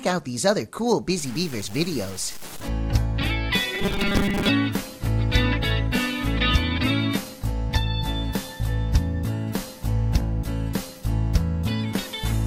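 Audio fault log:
1.18–2.68 s, low bit depth without dither: gritty distortion follows the sound, roughly 20 dB below it, likely from truncation to about 6 bits. The waveform shows staircase steps and the spectrogram a broadband smear.
3.75–4.49 s, robotic sound from repeated short buffers: a rigid metallic 200 Hz buzz, likely from 5 ms chunks repeating over most of the span. The spectrogram shows harmonics spaced 200 Hz apart and the waveform shows identical repeating blocks.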